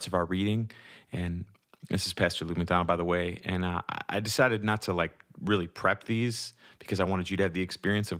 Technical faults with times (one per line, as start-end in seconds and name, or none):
none